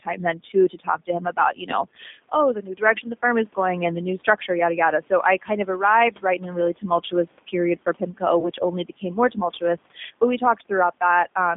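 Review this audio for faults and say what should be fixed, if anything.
The whole clip has gone through the G.729 codec, which fits an 8 kbit/s call. The band is squeezed to roughly 200 Hz to 3.6 kHz, and the speech, rebuilt from a filter and pitch model, sounds plainly rough and synthetic.

From 8.40 to 8.43 s there's VoIP packet loss concealed by the speech codec. About 20 ms went missing, which fits a single lost packet. The decoder stretched the preceding sound into a fading buzzy tone or coloured noise, and the speech stays weak or distorted briefly after.

To prevent both, capture the audio locally or use a wideband codec with jitter buffering and forward error correction on a steadier network.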